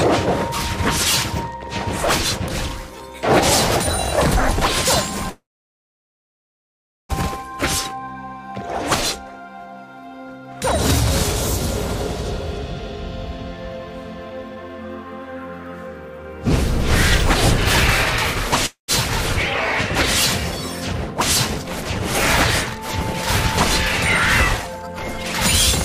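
Packets were likely held up in transit from 5.29 to 7.12 s, and the jitter buffer ran dry. This call audio freeze fills about 1.8 s: the last sound is stretched into a brief fading buzz, then about 1.68 s of silence. The audio resumes where it stopped, with nothing lost but now running 1.8 s later.

From 14.30 to 14.69 s the receiver, holding more buffered audio than its target, trims short pitch-period pieces to catch up. This jitter buffer speed-up plays at 117% speed, removing roughly 70 ms, so the sound briefly hurries at unchanged pitch.

A second stall, again likely from delayed packets, causes another call audio freeze from 18.66 to 18.91 s. It inserts 223 ms, including 130 ms of silence after a short fading tail. It shifts the audio later by that amount without dropping any of it.

From 24.62 to 25.01 s a further jitter buffer speed-up runs at 119%, cutting roughly 100 ms. The sound again rushes forward with its pitch intact.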